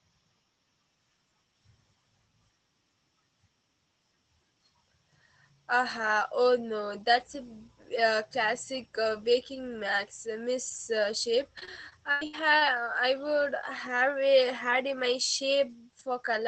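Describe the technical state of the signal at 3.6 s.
At 3.6 s the signal is intact, with no dropout, glitch or other fault at that point, only the band-limited sound of the call path it travelled through.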